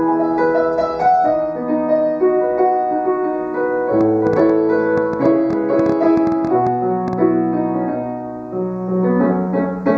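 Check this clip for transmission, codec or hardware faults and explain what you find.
Two faults are present. Throughout the clip there is channel delay (comb filtering): one channel trails the other by around 0.15 ms, and when the two are summed to mono, cancellation puts evenly spaced notches from around 3 kHz upward, giving a hollow, phasey top end.

From 4.01 s to 7.14 s a train of clicks runs at about 7 per second, unevenly spaced, around twenty in all, peaking around 10 dB above the signal. Pulses this uniform likely come from nearby electrical interference or a faulty connection or power supply, and they are heard as ticking over the sound.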